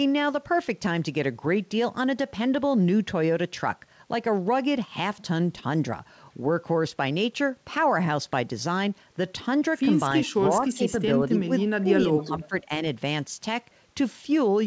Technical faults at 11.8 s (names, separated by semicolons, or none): speech suppressed in double talk